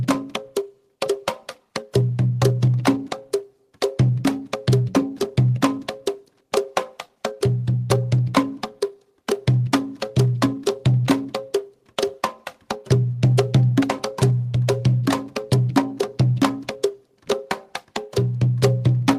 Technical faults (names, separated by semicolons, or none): clock drift between sender and receiver; repeated timing corrections